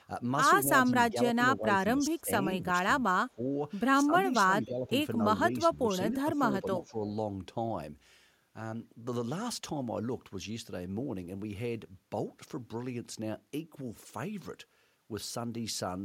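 From 0.64 to 3.42 s the speech repeatedly dips, with the deepest drop around 25 dB and about a second lost in total. Shallower dips of around 10 dB follow at 4.03–4.91 s and 5.58–6.96 s. This is speech suppressed in double talk: an echo canceller, likely confused by both sides talking at once, turned the near talker down.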